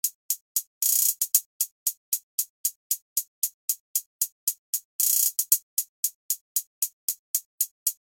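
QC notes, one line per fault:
Nothing to flag here; I listened all the way and didn't hear a single problem worth a note.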